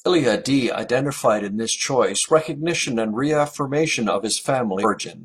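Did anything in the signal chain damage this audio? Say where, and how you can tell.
Yes. At 4.80 s, right after "recognition and reaffirmation of", the speech jumps forward, dropping roughly 150 ms of audio, and the join runs until about 4.85 s. That points to the codec stage: compressed frames were skipped, either missing from the stream or rejected by the decoder as corrupt. In a lossy codec overlapping frames blur such a splice into a smear, while lossless frames join with a hard click.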